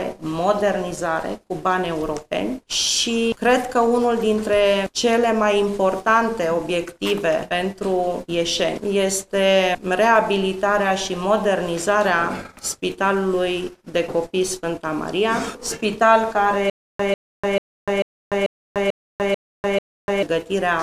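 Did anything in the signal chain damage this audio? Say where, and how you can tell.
Yes. From 16.70 s to 20.23 s there is a stutter with silent gaps. A burst of about 145 ms plays, then about 296 ms of dead digital silence follows, and the same burst comes back eight times at a steady 441 ms period. The identical repeating fragment and the silent gaps point to the playback or streaming stage. A likely stall made the player replay its last buffered chunk on each retry and then run dry, so the audio meant for that span is missing.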